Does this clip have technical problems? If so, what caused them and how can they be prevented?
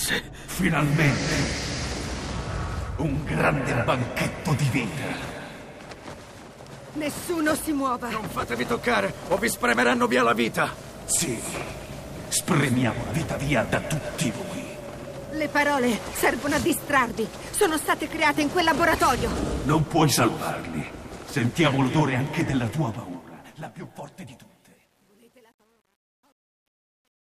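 Yes. Truncation distortion on the fade-out runs from 22.49 s to the end, worst from 23.54 s. Undithered, coarse steps, consistent with 9 bits, turn the tail gritty. Prevent it by fading at high resolution and dithering before reducing bit depth.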